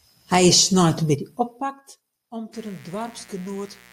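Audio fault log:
1.39–1.86 s, zipper noise: the level drops about 10 dB in unsmoothed 1 dB steps, roughly forty a second, and every step ticks, so you hear a zip.
2.53 s to the end, mains buzz: a raspy 60 Hz buzz about 20 dB below the speech, from sharp switching spikes spraying harmonics well up the spectrum.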